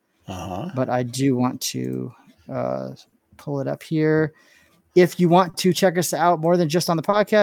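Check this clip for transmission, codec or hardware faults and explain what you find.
The clip has three related transmission faults, all from a timing mismatch between sender and receiver.

Clock drift between sender and receiver runs through the whole clip. The sender's clock is roughly 3 percent slower than the receiver's. Its audio arrives a little too slowly. The jitter buffer keeps draining, and the receiver must keep padding to stay fed. The sound itself is not damaged by this. What you hear instead are the small, uneven hiccups it causes.

Repeated timing corrections occur from 0.12 to 4.84 s. The receiver plays this stretch at 98 percent speed, repeating short pieces to stretch the audio. About a tenth of a second is added in total. The edits all lengthen, never shorten. They are spaced unevenly. Each is tiny, so the speech sounds slightly dragged and unsteady in tempo rather than broken.

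Short stalls from a late packet occur at 3.09 to 3.14 s, 5.50 to 5.56 s, and 7.10 to 7.15 s. Each time, a packet was not there when it was due, and the buffer ran dry. The receiver held the last sound for 30 ms, then 40 ms, then 30 ms, until the data came. Nothing is lost. Each stall pushes playback later by the same amount. You hear a sound held briefly too long, with a faint buzz or dip.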